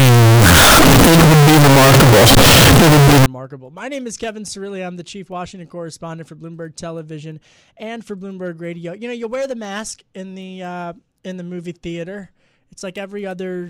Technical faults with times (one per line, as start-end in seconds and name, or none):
0.00-3.26 signed and unsigned mixed up